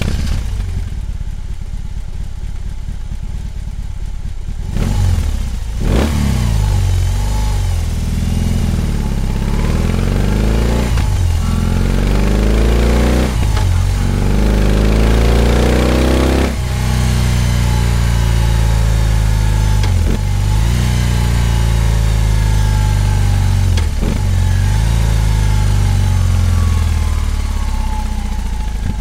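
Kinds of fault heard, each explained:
No technical faults detected.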